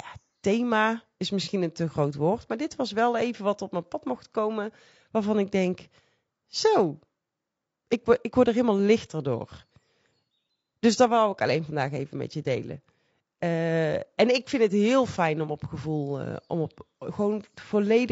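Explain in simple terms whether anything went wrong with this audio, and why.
Low-delay AAC compression, throughout: the speech sounds rough and grainy, likely from a video-call codec whose very short chunks capture voice pitch poorly and add noise.

AAC frame loss with concealment, 1.43 to 1.48 s: roughly 30 ms of audio went missing, and the decoder patched the gap from the preceding sound, leaving a brief smeared, noisy blip.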